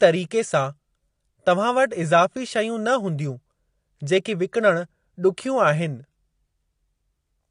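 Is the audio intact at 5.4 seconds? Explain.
No. At 5.4 seconds the speech carries the same damage it has throughout: nothing above 10 kHz, a dull, smeared top end, and a warbling, fizzy texture on sustained sounds and sibilants. This is likely AAC compression, AAC-LC at a low bitrate in the region of 32 kbps. The encoder, short of bits, lowers its cut-off and quantises the spectrum coarsely, leaving gaps and noise-filled bands that are plainly audible.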